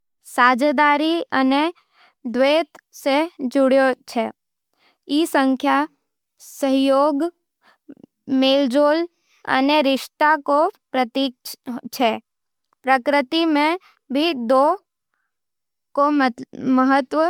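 Throughout the speech, the sound is swirly and hollow, with a smeared edge on consonant attacks. This is likely generation loss: the audio was decoded and re-encoded about four times with MP3. The band limit near 20.1 kHz fits a rate of around 135 kbit/s. Each pass quantises again on a shifted frame grid. The noise and spectral gaps stack up. The result sounds worse than that bitrate alone would produce.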